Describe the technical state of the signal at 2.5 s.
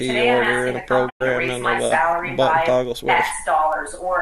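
At 2.5 s the signal is intact, with no audible fault at that point.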